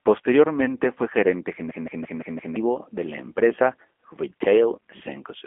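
Throughout, the G.729 codec cuts the speech to a narrow telephone band of about 250 Hz to 3.4 kHz and leaves a plainly rough, synthetic texture. From 1.71 to 2.56 s, a system hang loop repeats a 0.17 s fragment five times at 5.86 Hz, a stutter that fits an 8192-sample buffer, and about a second of audio is lost.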